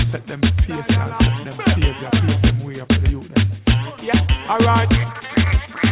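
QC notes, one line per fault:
No fault to note in these QC notes; the sound comes through the call path as telephone-band audio, with nothing above 4 kHz.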